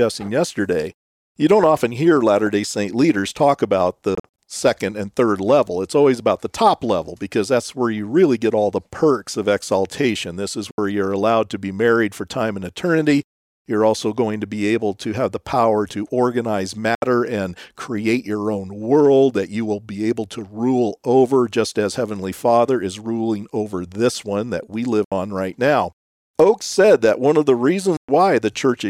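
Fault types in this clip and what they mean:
Bluetooth dropout: the speech cuts to sudden silence and resumes further on, likely from wireless packets arriving too late to play. Gaps fall at 4.15 s after "leaders talk about" (about 139 ms lost in bursts), 10.71, 16.95, 25.04 and 27.97 s.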